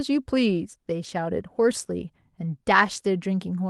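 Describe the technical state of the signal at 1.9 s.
At 1.9 s the speech is intact, with no dropout, glitch or other fault, only the ordinary coding character of the call path it travelled through.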